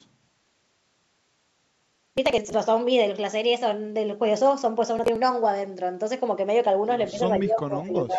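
A speech recording where the processor falls behind twice, missing dozens of buffers from 1.87 to 2.54 s and about ten from 4.99 to 5.16 s. The skipped chunks, consistent with buffers around 10 ms, leave a gritty processor overload crackle of tiny hard-edged gaps tearing through the sound. From 7.11 s to the end at 8.18 s, speech suppressed in double talk is the likely cause of the talker dipping: an echo canceller pulling the level down by as much as about 15 dB over roughly a second, within a call band topping out at 8 kHz.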